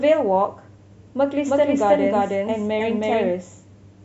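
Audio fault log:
1.47 to 3.33 s, doubled audio track: from 1.47 s the speech is suddenly heard twice, a second full-band copy trailing the first by around 0.3 s and at roughly the same loudness, so every syllable is restated as a dry, clipped repeat with no reverb tail or room colour. It cuts in abruptly at 1.47 s and out abruptly at 3.33 s. The likely cause is the signal being captured a second time through a slower path, or an edit stacking two offset copies.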